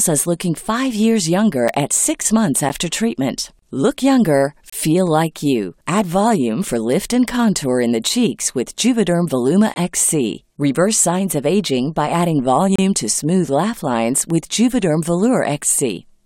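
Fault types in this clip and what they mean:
Gap between stream segments: The timestamps of adjacent one-second segments fail to meet, so the player fills the space with silence. The speech cuts out abruptly with hard edges, then resumes with nothing lost. Holes fall at 1.68 s after "looking five years younger", at 2.69 s after "six months", at 4.70 to 4.73 s, at 9.74 to 9.76 s, and at 12.76 to 12.79 s after "of aging by adding". Each lasts between 8 and 29 ms.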